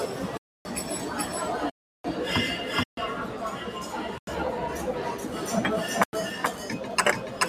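Doubled audio track, throughout these everyday sounds: a second, full-band copy trails the original by around 400 ms at about the same level, with no decay or room colour, so every event sounds twice. This is likely a second capture through a slower path or an edit holding two copies out of step. Noise suppressor applied to music or sounds, also throughout: a speech-oriented suppressor treats steady tones, ambience and tails as noise and pulls them down by around 5 dB while attacks pass, so the sound pumps and thins between events. Blocks of digital silence occur at 0.37–0.65 s, 1.70–2.04 s, 2.83–2.97 s, 4.18–4.27 s and 6.04–6.13 s. Each is a hard drop to silence, lasting from about 93 ms to 346 ms. The two 93 ms holes fit a 4096-sample output buffer that wasn't filled in time.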